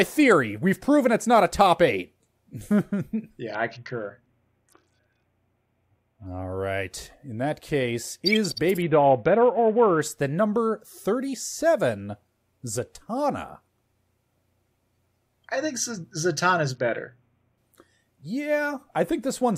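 A congested Bluetooth link forced repeated SBC bit pool drops, at 3.54 to 6.26 s, 8.81 to 10.02 s (after "that case is", before "than number") and 16.75 to 17.58 s. Starved of bits, the speech turns dull and gritty, consistent with the bit pool falling from 28 to about 6, near 60 kbps.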